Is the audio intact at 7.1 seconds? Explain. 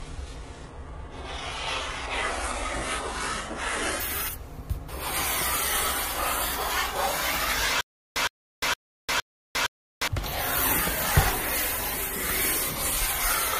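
Yes, at 7.1 seconds the audio is intact, with no fault to be heard at that moment.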